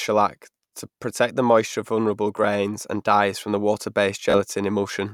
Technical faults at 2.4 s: Bluetooth stutter

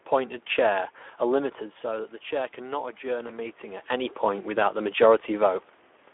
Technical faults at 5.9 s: Speex codec

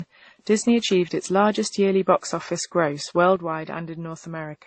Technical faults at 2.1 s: transcoding between lossy codecs

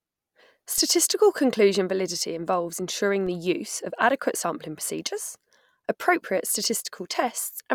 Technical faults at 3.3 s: DC step

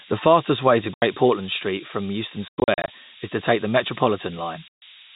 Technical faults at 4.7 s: low bit depth with noise shaping; packet loss filled with silence

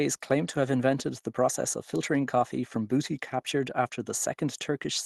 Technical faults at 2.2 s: none

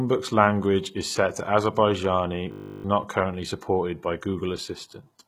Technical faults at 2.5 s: HE-AAC compression; system hang loop

